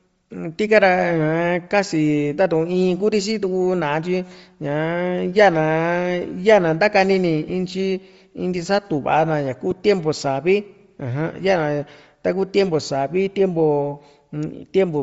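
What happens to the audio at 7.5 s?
A lost LE Audio frame occurs at 7.49 s: a 7.5 ms gap, which points to a single dropped frame, where the decoder fills in by replaying the previous spectrum with randomised phase signs. The result is a brief grainy smear rather than silence, too short to fade. This sits within audible compression across the whole speech clip, a breathy, grainy top end where the upper band is replaced by noise, likely from Bluetooth LC3 compression with 7.5 ms frames at a rate that fits 32 kbps.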